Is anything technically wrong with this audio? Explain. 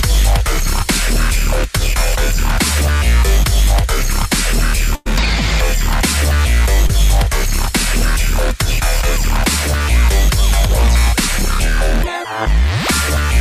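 Yes, there are two network dropouts in this one.

At 4.95 to 5.07 s there's a burst of packet loss. A run of packets either never arrived or showed up too late to play, so the receiver had to cover roughly 100 ms on its own. It carried the last bit of sound forward and pulled the level down as the gap went on. That comes across as a held buzz or a fading hiss, depending on what was playing. When real audio comes back, about 100 ms of the original is simply gone.

Then at 6.87 to 6.91 s there's a short concealed packet loss. About 20 ms of audio didn't reach the decoder in time. The receiver patched roughly 18 ms of that by extending the preceding sound, using its pitch if it was tonal or shaped noise if not, then crossfaded back into the real signal. You hear it as a quick smear or wobble, and anything very brief in that spot can drop out entirely.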